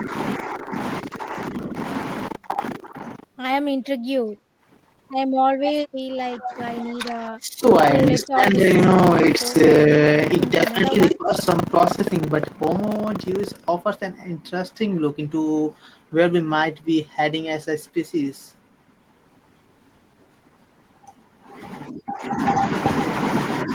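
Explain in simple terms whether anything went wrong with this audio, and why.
Buffer tearing runs from the start to about 13.7 s. The program filling the audio buffer and the sound hardware reading it fell out of step. Roughly a third of each chunk replays sound from about 70 ms earlier, causing a robotic buzz about 25 times a second.

Background gated by the echo canceller happens from 4.46 to 4.61 s. While the loudspeaker played, the echo canceller pulled the microphone down sharply, so the room sound briefly dips and then comes back.

Speech suppressed in double talk occurs at 5.65–6.59, 6.82–7.65, 8.11–8.60, 9.37–9.54 and 10.67–11.33 s. The talker's voice sinks or cuts out in pieces, most deeply in the first stretch. This is likely because both sides spoke at once, and the canceller turned everything down.

Echo leak appears from 6.44 to 6.53 s as a quieter, delayed copy of the voice arriving about 0.19 s late. 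The likely cause is that the echo canceller at a loudspeaker end failed to remove everything its microphone heard, and sent it back.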